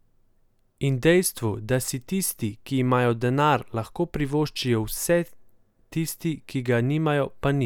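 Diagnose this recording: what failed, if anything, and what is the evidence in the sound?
Nothing failed, and the speech holds no audible evidence of a fault at any stage.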